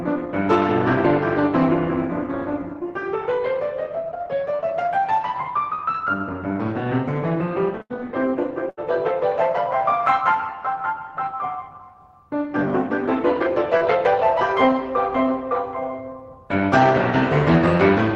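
At 4.55 s and 5.75 s there's short concealed packet loss in the music. About 40 ms of audio didn't arrive in time, and the receiver patched roughly 30 ms by extending the last sound and blending back in, so you get a quick smear or wobble.

At 7.82 s and 8.70 s it's a burst of packet loss, about 80 ms gone each time. The decoder stretches the previous sound for around 75 to 79 ms while fading it down, then the music picks up further along with that chunk missing.

At 13.77 s there's one more short concealed packet loss, the same kind of 40 ms hole covered for about 36 ms, heard as a brief wobble before the real audio returns.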